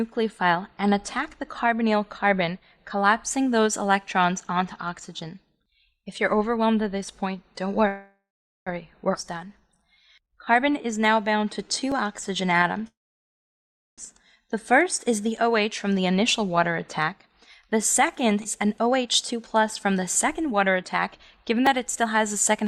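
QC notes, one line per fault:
7.87–8.69 s and 12.87–14.01 s, call audio freeze. The sound stops and the last fragment is stretched into a fading buzz, then goes quiet. The first gap lasts about 0.79 s, with roughly 0.46 s of it near silent. The second lasts about 1.1 s, almost all silent. Playback then resumes where it left off, and nothing is lost. Packets were likely held up in transit, so the jitter buffer ran dry and the receiver filled the wait.
9.14–9.18 s and 18.44–18.48 s, skip ahead. Playback jumps forward at each point with almost no gap. Roughly 0.4 s of audio vanishes at the first jump and about 0.2 s at the second. The two sides are butted together, so the sound lurches forward. A stretch of audio was dropped while later audio was already queued, either in transit or by an overflowing buffer, and the stream was spliced straight on.
9.25–12.74 s, jitter buffer slow-down. The sound drags at about 90% speed while the pitch stays unchanged. 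Held sounds are drawn out. About 363 ms is added over the stretch. The buffer was short of reserve, so the receiver repeated single pitch periods and small pieces of pauses over and over to build up delay.
11.92 s and 21.66 s, repeated buffer. Each is a tiny hard click or brief buzz rather than an audible stutter. The repeated piece is about 2.67 ms long, which fits a 128-sample buffer. It plays once extra at 11.92 s and twice extra at 21.66 s. Fresh audio missed the device deadline, so the last buffer was played again with a hard join at each repeat.
17.41–22.64 s, jitter buffer speed-up. The sound runs at about 109% speed at the same pitch, so it feels hurried and pressed together. Roughly 0.5 s is cut out across the stretch. Too much audio had piled up in the buffer, so the receiver trimmed short slices of one or a few pitch periods, repeatedly, to bring the delay back down.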